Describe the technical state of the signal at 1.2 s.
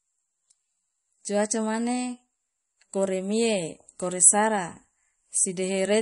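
MP3 compression damage is present at 1.2 s and runs through the whole clip. The speech has nothing above 10.6 kHz, and it has a clearly audible watery, swirling quality. This is likely lossy MP3 encoding at a low bitrate, around 40 kbps. Starved of bits, the encoder cut the treble at a fixed point and dropped weak frequency lines, which flicker on and off between frames, smearing consonant edges and leaving a metallic shimmer on sibilants.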